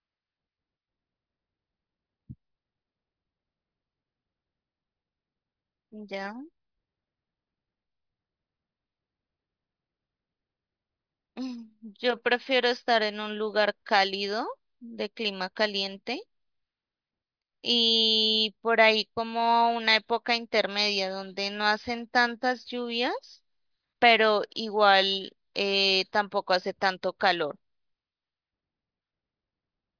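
Nothing goes wrong anywhere in this stretch of speech, so there's no technical fault to point to at any moment.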